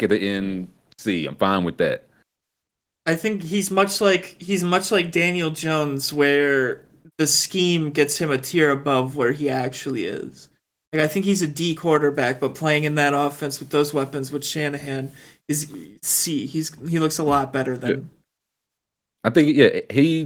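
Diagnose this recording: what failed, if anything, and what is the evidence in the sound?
Nothing in this speech recording has failed: the signal shows no dropouts, distortion or timing breaks, and it carries the character of Opus voice compression in its hybrid mode, with the full audio band kept rather than narrowed.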